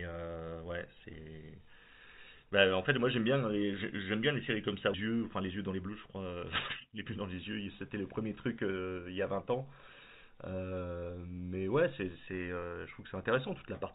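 At 4.94 to 4.96 s there's a skip ahead: roughly a second of speech just vanishes, and playback jumps forward with no gap filled in. Right after, from 5.08 to 6.36 s, the jitter buffer speed-up kicks in, trimming tiny pitch-period slices so speech runs about 19% fast at the same pitch, shaving around a third of a second. A milder speed-up follows at 6.85 to 7.67 s, about 7% fast. Through all of it, nothing comes through above 4 kHz, which fits a G.711 mu-law call path.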